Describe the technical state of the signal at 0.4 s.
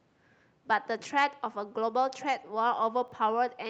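At 0.4 s the speech is intact, with no dropout, click or distortion, only the ordinary band limit near 8 kHz that the call microphone processing and the Opus call path apply.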